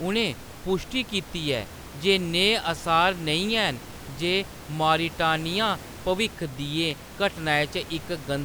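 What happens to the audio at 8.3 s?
At 8.3 s the speech carries on intact, with only the room's own background noise sitting about 16 dB below it.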